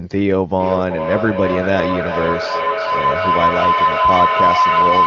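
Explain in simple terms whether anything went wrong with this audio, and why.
From 0.6 s right through to the end at 5.06 s, there's a feedback howl. Two devices in the same room are on the call, so the sound loops from speaker to microphone and grows each trip, becoming a tone around 1 kHz that throbs about every 0.4 s and ends up louder than the speech.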